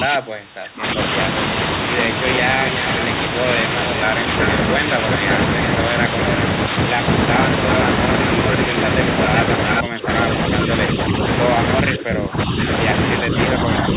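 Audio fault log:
0.00–0.98, 9.83–10.08, 11.83–12.58, 13.25–13.34 s, speech suppressed in double talk: the level ducks by as much as about 25 dB in the first second, about 15 dB in the middle two stretches, and only about 5 dB at the end. The likely cause is an echo canceller mistaking overlapping talk for echo. The narrow band, with nothing above 4 kHz, is constant and comes from the G.711 call codec, not from these dips.
9.71–9.78 s, echo leak: a short, distinct copy of the sound returns 378 ms late, only about 5 dB below the speech. The likely cause is a speakerphone echo canceller that left some pickup in the signal. The delay sets it apart from room reverb, which blurs into the sound instead of repeating it.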